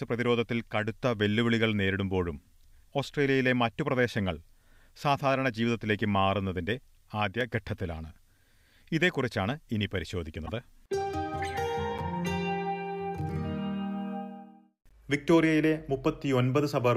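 At 7.41 s there's a block of digital silence. The output briefly drops to silence for about 1.9 ms, probably because the buffer wasn't filled in time. There's no fade in or out, so the hard edges make it land as a quick tick rather than an audible gap. The same fault returns at 11.98 s, this time lasting about 7.3 ms. That's still short enough to land as a tick or dip rather than a hole.

In between, from 10.46 to 10.50 s, a corrupt frame gets decoded. Flipped bits in the compressed data, roughly a couple of frames' worth, went through the decoder anyway. Wrong gains and misread codes pushed energy into the wrong parts of the spectrum for those 48 ms or so. The result is a short, unnatural chirpy blip that doesn't belong to the surrounding sound.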